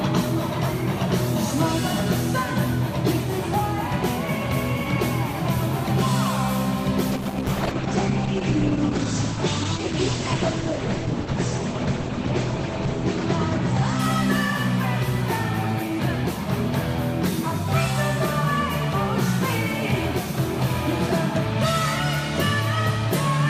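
From 7.13 s to 16.05 s there is a call bitrate drop: the bandwidth estimate collapsed, and the encoder was pushed from a generous rate down to a very low one, which fits a fall from around 128 kbps to about 10 kbps. Audio content above 8 kHz disappears instead of reaching 16 kHz, so the sound turns muffled, and the coarser coding adds a rough, watery texture. The worst stretch lasts about 5.8 s before quality recovers.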